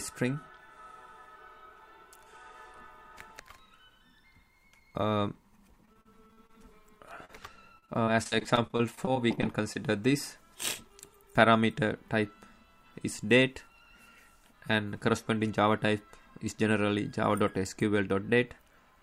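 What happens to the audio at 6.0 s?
Around 6.0 s the sound hits repeated packet loss (robotic sound), running from about 5.85 to 6.51 s. Six short gaps, the longest 38 ms, get patched by stretching the last bit of audio, so about a quarter of that stretch turns choppy, with pieces missing.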